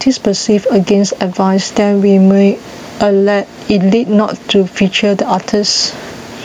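Across the whole recording the gain swings by around 10 dB, so the speech sounds squashed and level. This is gain pumping, likely from input gain set far too high with a fast limiter clamping each loud sound. The room noise sits about 37 dB below the speech.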